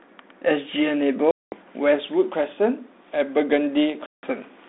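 Speech over a telephone-band ADPCM line shows packet loss on an ADPCM call twice. Hard-edged silent holes run from 1.31 to 1.55 s and from 4.06 to 4.26 s, about 210 ms and 170 ms of missing sound. The gaps suggest bursts of roughly twenty and fifteen lost packets. Afterwards, the decoder's predictor and step size no longer match the sender's. So the sound resumes slightly distorted before settling.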